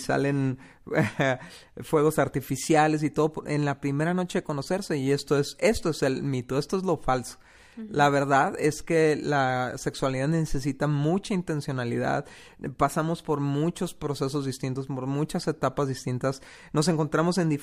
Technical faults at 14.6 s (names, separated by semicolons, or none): none